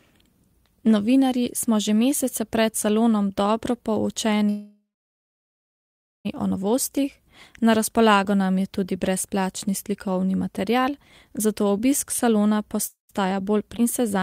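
At 4.49 to 6.27 s a call audio freeze stretches the last sound into a fading buzz, then about 1.4 s of silence, likely from late packets draining the jitter buffer. Speech resumes where it stopped, so nothing is lost, unlike a dropout. A shorter freeze at 12.87 to 13.11 s adds a 0.22 s gap.

From 13.24 s to the end, a jitter buffer speed-up plays speech about 7% fast at unchanged pitch, trimming around 70 ms in tiny cuts. It sounds hurried rather than chipmunk-like.

At 13.76 to 13.79 s a skip ahead jumps forward with almost no gap, dropping roughly one and a half seconds of speech. Unlike the freezes, material is missing rather than delayed.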